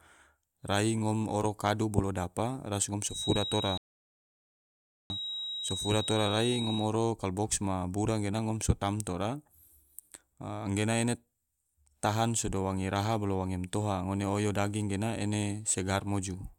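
At 3.05 s a thin, steady whistle rises in behind the speech, sitting at 3.8 kHz and only a little quieter than the speech itself. It hangs on until 6.93 s, swelling and fading slowly in level. That's a feedback whistle, and the likely cause is the speaker-to-mic loop sitting right on the edge of feedback: enough gain for that one frequency to keep ringing, but not quite enough to run away and howl.

Right in the middle of that, at 3.78 s, there's a rebuffering stall. The speech just drops to silence while the player waits on more data, then picks up at 5.10 s exactly where it left off. Nothing gets skipped, but about 1.33 s of dead air is added to the timeline, so anything synced against this clip will drift by that much from there on.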